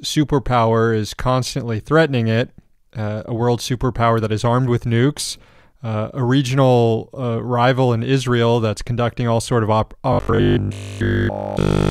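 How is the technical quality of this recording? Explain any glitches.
The recording has one glitch, near the end. From 10.13 s to 11.91 s the speech turns into a rigid, metallic buzz pitched at 50 Hz, with essentially every moment repeated. This is robotic sound from repeated short buffers, likely caused by audio arriving too seldom so playback loops the last 20 ms chunk, imposing that fixed pitch.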